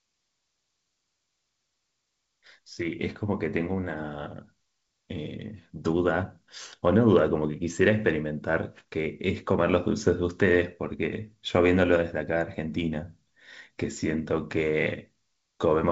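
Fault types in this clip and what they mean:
No fault can be heard anywhere in this speech. It passes through G.722 wideband telephone coding at 64 kbit/s, which leaves at most a faint trace of its own coding.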